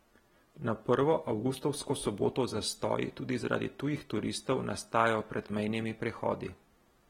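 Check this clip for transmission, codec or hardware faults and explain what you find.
One codec fault runs through the whole recording. AAC compression, likely AAC-LC at a bitrate low enough to fit about 43 kbps, has thrown away the speech's upper spectrum above 16.6 kHz and coarsely quantised what remains, leaving plainly audible smearing, dullness and a fizzy, warbling edge on sibilants.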